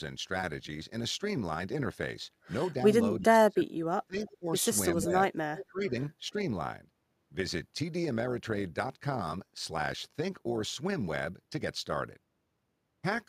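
Throughout the speech, overlap-add ripple makes the level rise and fall by about 6 dB roughly 150 times a second. The frames were rejoined with overlaps that do not sum to a steady gain, so the result is a rough, buzzy tremolo that never stops. A slow modulation would sound like wobble instead.

From 3.2 to 3.78 s, 4.07 to 4.46 s, 4.95 to 5.36 s, 5.65 to 5.93 s and 6.32 to 6.36 s, the voice dips, most deeply at about 30 dB at first and only slightly at the end. These drops are likely speech suppressed in double talk, where the echo canceller turned down the near talker while the far side was also speaking. A network dropout would instead cut cleanly to silence, without these uneven partial dips.

From 5.56 to 5.66 s, a short copy of the voice returns 347 ms late at about 20 dB below the speech. This is likely an echo leak, where the canceller missed part of the loudspeaker sound. The long fixed delay sets it apart from room reverberation, which trails off smoothly.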